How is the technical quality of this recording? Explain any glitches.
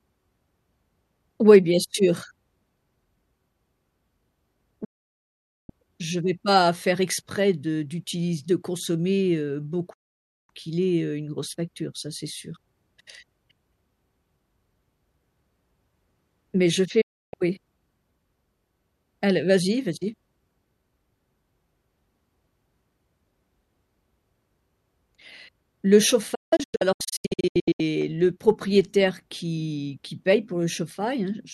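The speech is cut four times by digital broadcast dropouts: at 4.84 s (0.84 s of silence), 9.93 s (0.55 s), 17.01 s (0.31 s), and from 26.35 s to 27.80 s, where several short holes, the longest 0.17 s, add up to 0.86 s. Each time the receiver lost usable frames and muted with a fast 8 ms fade. The audio sent during those gaps is gone, and the speech resumes mid-flow.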